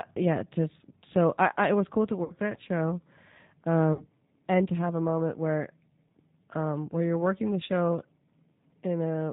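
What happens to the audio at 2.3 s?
Between 2.24 and 2.34 s, after "it was cool to" and before "that show", there is VoIP packet loss concealed by the speech codec. About 60 ms of audio was lost, which fits three 20 ms packets. The decoder stretched its last pitch and filter at falling gain, so the speech smears into a fading buzzy tone or coloured noise instead of dropping to silence or clicking, and it stays faint for a moment as the speech resumes.

The G.729 codec is plainly audible throughout, including here. At 8 kbit/s it rebuilds speech from a filter and a pitch predictor and passes nothing above 4 kHz. The result is a steady, band-limited, slightly synthetic roughness, which sets it apart from the brief concealment event.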